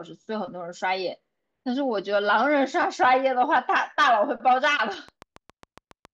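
A train of clicks runs from 4.80 s to 6.06 s in this speech clip: roughly ten short, near-identical pulses at a steady 7.2 per second, each about as loud as the speech itself, so they tick plainly over the voice and in any gaps. The even spacing and repeated shape point to a periodic disturbance entering the signal chain, likely interference from nearby equipment or a faulty connection or power supply.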